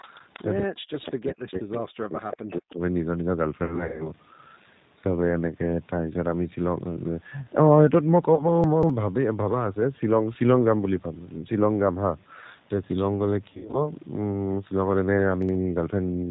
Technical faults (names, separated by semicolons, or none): G.729 codec; echo leak; speech suppressed in double talk; VoIP packet loss concealed by the speech codec; chunks out of order